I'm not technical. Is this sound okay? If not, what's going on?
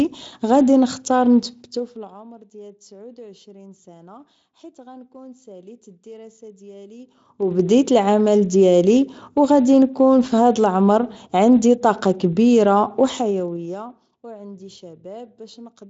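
No. The speech has zipper noise in three places: from 1.45 to 2.22 s the level drops, from 7.00 to 7.68 s it rises back, and from 12.97 to 14.08 s it drops again. Each change is made in small jumps, around ten a second, instead of a smooth slide. Every jump leaves a faint click, so while the volume moves you hear a quick ticking or zipping over the speech.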